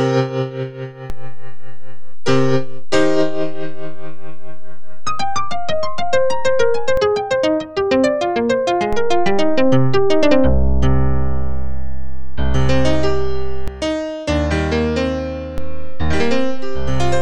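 At 1.1 s the waveform's zero line jumps by about -14 dBFS, a DC step that holds until 6.97 s and then drops back. The same happens at 8.93 s (about -12 dBFS, released at 13.68 s) and at 15.58 s (about -13 dBFS, held to the end). Each jump and return is a low thump. On a waveform the trace visibly lifts off centre; on a spectrogram each edge is a brief broadband smear concentrated at the bottom.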